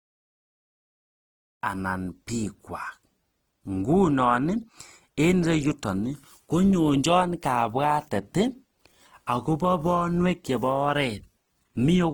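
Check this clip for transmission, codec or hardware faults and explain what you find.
There's one codec problem, present from start to finish, including through the gentle fade-in that ends around 1.63 s. The speech is likely Opus compression in its music mode at a low rate, around 16 kbps. The full band survives up to about 20.2 kHz, but with so few bits the encoder patches bands with folded or noise-like content, so the speech turns plainly grainy and rough.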